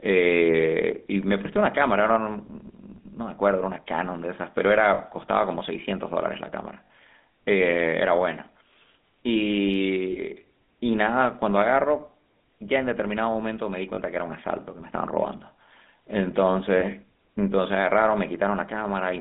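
Speech heard through the GSM full-rate codec, with plainly audible coding damage throughout. The voice has a buzzy, gravelly roughness, the result of rebuilding it from a vocal-tract model driven by sparse, regularly spaced pulses, which fits the 13 kbps full-rate coder. The line band runs from about 200 Hz to 3.6 kHz. A spectrogram shows a hard ceiling near 3.6 kHz with nothing above it, little energy below 200 Hz, and harmonics that look smeared and grainy rather than clean. Lost GSM frames interrupt the audio at 4.94–4.99 s, 6.85–6.90 s, 10.12–10.19 s, 13.94–14.00 s and 16.80–16.84 s, each lasting about 20 to 60 ms. In these gaps the decoder repeats the last good frame's settings, so the sound is held as a brief rough, metallic ring. The longest gap, at 6.85 s, fits three missing 20 ms frames. On a spectrogram each gap shows as a short stretch of frozen, repeated spectral texture.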